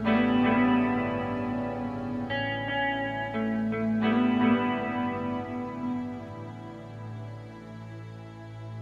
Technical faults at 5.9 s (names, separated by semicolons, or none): none